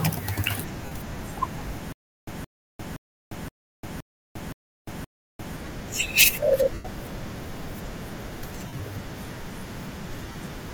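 At 0.85 s, 6.74 s, 8.66 s and 10.23 s there are lost LE Audio frames. The first gap lasts 60 ms, the second 105 ms, and the later two are scattered over 135 ms and 120 ms, with longest runs of roughly 50 and 30 ms. The decoder fills each hole by reusing the last spectrum with randomised signs, so the sound turns into a brief hissy smear that fades. It does not cut off abruptly or repeat, which sets it apart from a stutter.

From 1.92 s to 5.56 s there is a stutter with silent gaps, likely from the stream stalling and retrying. The same 170 ms fragment plays seven times, each followed by about 350 ms of digital silence, so it returns every 520 ms at an even pace. The looped burst is an exact replay separated by true silence, not a noisy decay, and the audio meant for that stretch never arrives. Light lossy compression runs throughout as normal.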